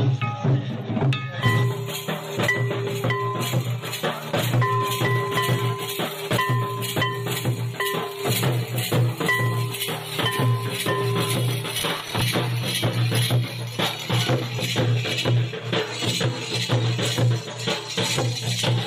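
A gritty burst of crackle tears across the sound from 11.80 to 12.21 s, a short run of hard-edged ticks and stutters that stops when the load passes. This is processor overload crackle: the processor fell behind and missed a string of buffer deadlines over that short stretch, about seven of them, with buffers of around 10 ms each. Every miss replayed a scrap of stale audio with sharp edges, and those repeated fragments pile up into the tearing texture.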